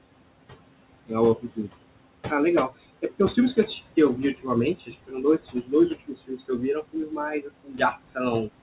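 A speech recording carried over a narrowband call path, with nothing above 4 kHz, fitting a G.711 mu-law link at 64 kbps. Room noise sits about 14 dB below the voice. Throughout, there are noise suppressor artifacts: the suppressor pulls the background down by about 21 dB in the pauses and lets it swell back under each phrase. On a spectrogram the noise floor pumps between dark gaps and lighter patches beneath the speech, speckled with isolated blobs of leftover noise. Speech cut by the noise suppressor happens at 1.36–1.69 s, 4.16–4.49 s, 4.75–5.73 s, 5.90–6.63 s, 6.82–7.18 s and 7.40–8.17 s. Here the suppressor mistakes soft parts of the voice for noise and ducks them by about 14 to 19 dB, deepest in the last stretch, so endings and quiet consonants sound swallowed. Each span loses only a fraction of its length, from a brief moment to roughly half a second. The waveform shows these as sudden notches in the envelope, and the spectrogram shows them as missing energy where the voice should continue.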